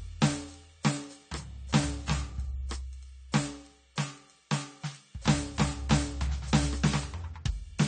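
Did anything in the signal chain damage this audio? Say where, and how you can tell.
Yes. Throughout the music the top end is missing, with nothing above about 9 kHz, so the whole mix sounds dull and smeared, and sustained tones carry a warbly, fizzy texture. That points to the codec stage, likely AAC compression. An AAC-LC encoder short of bits lowers its cut-off and quantises the remaining frequency lines so coarsely that bands thin out or fill with noise, which fits a bitrate around 32 kbps.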